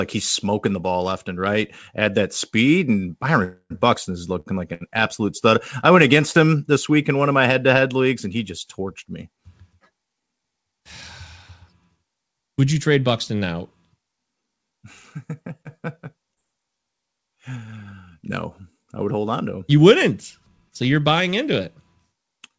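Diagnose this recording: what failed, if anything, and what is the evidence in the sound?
Call audio freeze, network and jitter buffer: after "that speed and", sound at 3.44–3.72 s is held and decays, with a brief silence, likely from delayed packets draining the buffer.

Short stall from a late packet, jitter buffer: sound is stretched at 4.40–4.48 s (53 ms) and 4.74–4.83 s (70 ms, before "absolute stud I went"), then resumes intact.

Short concealed packet loss, network: brief smears at 15.63–15.67 s and 16.35–16.38 s, where roughly 20 ms each went missing and was synthesised from preceding sound.

Jitter buffer speed-up, buffer: from 19.78 to 21.21 s, before "into it", audio runs at 104% with unchanged pitch as pitch-period slices, about 70 ms total, are dropped.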